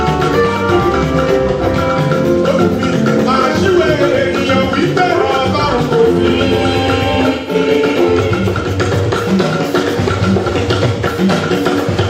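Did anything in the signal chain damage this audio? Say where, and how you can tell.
Yes: AAC frame loss with concealment in the codec at 1.50–1.62 s and 7.35–7.55 s. Smeared, noisy or phasey patches are rebuilt from the last spectrum, not left as silent gaps.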